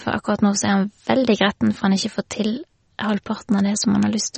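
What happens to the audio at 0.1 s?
At 0.1 s the speech already carries the damage that runs through the whole clip, likely from MP3 compression at a low bitrate, around 35 kbps. Nothing is left above 8.4 kHz, and weak frequency lines drop in and out between frames, giving a watery, swirling texture and smeared consonants. A plain low-pass filter would dull the top just as cleanly but leave the remaining sound steady. That flickering, metallic swirl marks a codec starved of bits.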